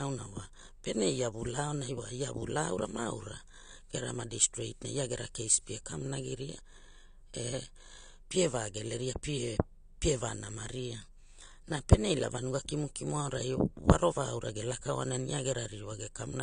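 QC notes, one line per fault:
Throughout, AAC compression: nothing is heard above 9.9 kHz, and the speech carries plainly audible coding damage, likely AAC-LC at a low bitrate near 32 kbps. Unlike a plain low-pass filter, the damage reaches below the cut-off, where coarse quantisation strips detail.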